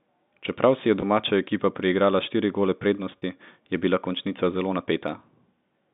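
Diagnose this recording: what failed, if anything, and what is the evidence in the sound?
Network stage: packet loss with pitch repetition. Gaps at 1.00–1.02 s after "si je" and 3.18–3.22 s after "ekipa priigrala štiri gole" sound held and buzzy. The receiver repeated the last pitch period over 20 ms and 40 ms losses, which fits one and two dropped 20 ms packets.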